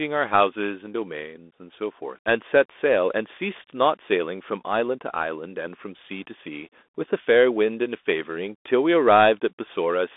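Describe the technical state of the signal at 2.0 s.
At 2.0 s, as across the whole clip, the speech sounds thin and boxed-in, with scratchy s sounds over a granular hiss and nothing above 3.8 kHz. This is the Bluetooth CVSD headset codec, whose one-bit up/down steps cannot keep up with loud high content.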